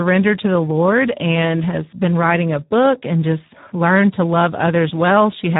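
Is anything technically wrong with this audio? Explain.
Yes, Speex codec damage runs through the whole speech clip. The coding is heavy and fits a rate of about 8 kbps. Too few bits for the excitation leave the speech hoarse, noisy and buzzy. Nothing remains above 3.8 kHz.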